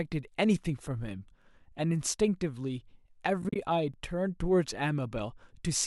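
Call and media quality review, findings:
Overlapping chunks, 1.42–1.44 s and 3.94–3.96 s. Short stutter: 20 ms of audio plays twice at each join. Joins sit 2.5 s apart, so it's the chunking stage in the processing or transport path. Each new 2.5 s chunk starts 20 ms before the previous one ends, and the overlap is played out instead of trimmed or crossfaded.

AAC frame loss with muting, 3.42–3.56 s. Soft-edged dropouts: about 80 ms missing, spread over 140 ms, longest gap roughly 40 ms. Points to several lost frames in the decoder path. Missing frames are zeroed, and the overlapping windows fade the sound down and back up around each hole. The codec is likely low-delay AAC, with light coding damage.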